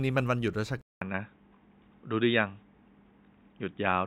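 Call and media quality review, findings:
Input switched to a poorer device, 0.81 s to end: 200 ms gap, then speech dulls, nothing above 3.8 kHz, small level shift, faint new noise floor. Likely capture moved to a narrowband microphone or headset call profile with its own tone.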